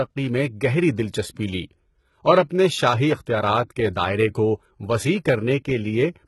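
HE-AAC compression throughout: treble likely copied up from lower bands, making s sounds gritty and metallic. Nothing above 11.8 kHz, consistent with about 16 kbps.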